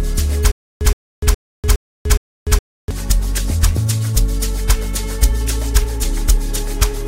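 From 0.52 s to 2.91 s the audio falls into a stutter with silent gaps. A burst of about 120 ms repeats five times, each followed by roughly 294 ms of dead digital silence, so the pattern recurs every 415 ms. The likely cause is a stalled player or stream replaying its last fragment on each retry before running empty. Unlike a random dropout, the same burst recurs at a steady rhythm, and the material that belonged in this stretch never arrives.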